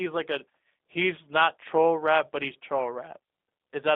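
From start to finish the speech carries G.729 codec damage: a narrow line band of roughly 250 Hz to 3.7 kHz, plainly rough, buzzy synthetic texture from pulse-based excitation, consistent with 8 kbit/s G.729A. A spectrogram shows nothing above 3.7 kHz and smeared, blocky harmonics.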